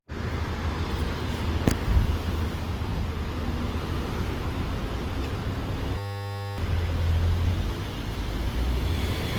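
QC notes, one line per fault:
throughout: generation loss, swirly, hollow and smeared beyond what one 48 kbit/s Opus pass would give, likely from about seven re-encodes stacking quantisation noise.
5.98–6.58 s: system hang loop, one 10 ms slice repeats exactly 60 times, a steady 100 Hz buzz rather than a stutter, with about 0.7 s of sound lost.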